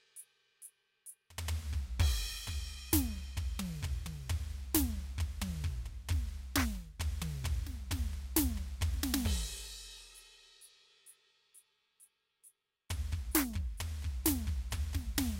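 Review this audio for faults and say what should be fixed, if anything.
Nothing in this music needs to be fixed, as no faults can be heard in it.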